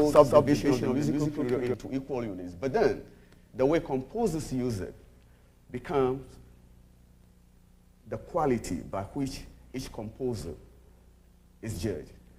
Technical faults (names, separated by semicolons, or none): doubled audio track